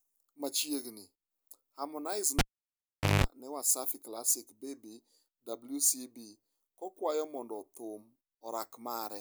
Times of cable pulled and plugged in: 2.39-3.24

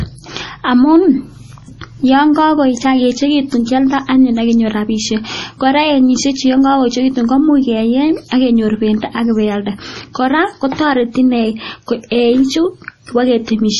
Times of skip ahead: none

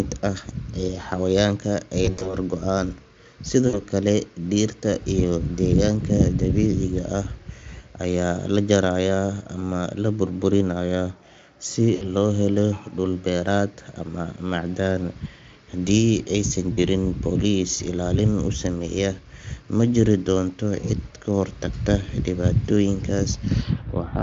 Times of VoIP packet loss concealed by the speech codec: 2.05-2.36, 3.67-3.79, 11.95-12.03, 16.73-16.79

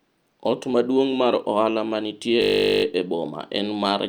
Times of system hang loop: 2.42-2.84

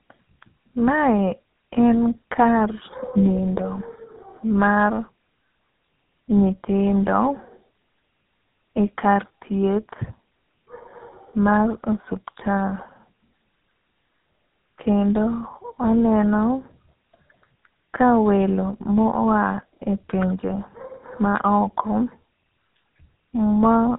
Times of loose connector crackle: none

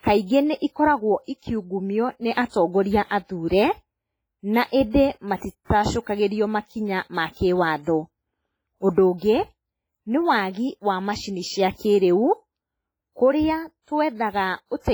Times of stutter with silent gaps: none

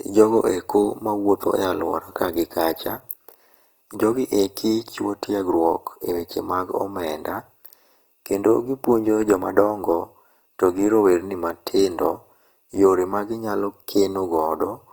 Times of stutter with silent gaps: none

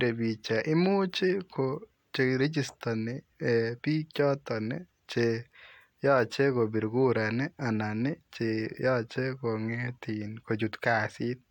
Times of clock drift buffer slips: none

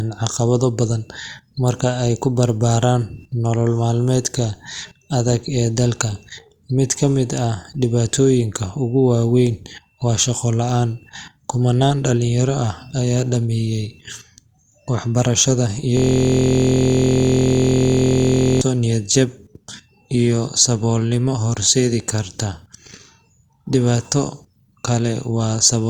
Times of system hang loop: 15.97-18.61

